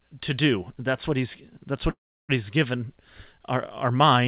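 A speech clip over a narrowband call line, with nothing above 4 kHz, which fits G.711 A-law at 64 kbps. After "what he's that's", at 1.9 s, there's a call audio freeze lasting to 2.31 s: a brief tail of the last sound, then about 0.33 s of silence before "he's given our" picks up where it stopped. Nothing is lost, but everything after lands 0.39 s late, likely because packets stalled and the jitter buffer ran dry.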